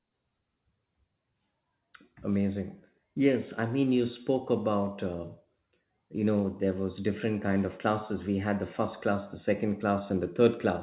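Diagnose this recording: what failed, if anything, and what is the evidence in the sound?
Nothing failed in this recording.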